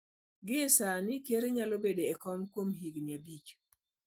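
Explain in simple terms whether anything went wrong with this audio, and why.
Nothing went wrong here: the speech comes through with no faults to point to, just the light touch of the voice compression it was sent with, which keeps the full range of the sound.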